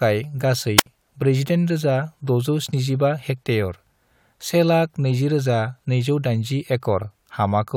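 From 0.77 s to 0.86 s, a brief surge of hiss gives way to a near-silent gap of about 69 ms before the speech returns. This is a wireless microphone squelch dropout: the analogue FM signal faded, so the receiver's squelch muted its output.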